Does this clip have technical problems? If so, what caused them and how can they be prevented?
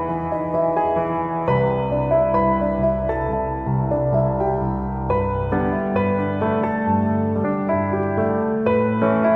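Yes. Compressed frames are skipped at 3.32 s and 7.43 s. Each time, the audio jumps ahead about a tenth of a second, roughly four 23.2 ms frames. Checking file integrity after transfer and storage prevents this.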